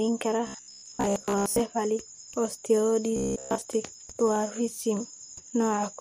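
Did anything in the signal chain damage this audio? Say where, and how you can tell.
Yes, at the driver or buffer stage. Robotic sound from repeated short buffers at 0.47–1.59 s and 3.16–3.61 s. A rigid 66.7 Hz buzz points to likely 15 ms chunks repeating.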